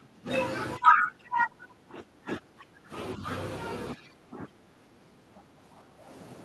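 The speech dips in level four times, at 0 to 0.29 s, 0.77 to 2.91 s, 3.15 to 3.26 s and 3.94 to 6.09 s, by roughly 20 dB at first, around 15 dB in the two long stretches and only slightly at 3.26 s. This is speech suppressed in double talk, likely an echo canceller ducking its own talker while the far side spoke. Unlike a network dropout, this comes from the echo canceller turning the voice down, not from lost audio.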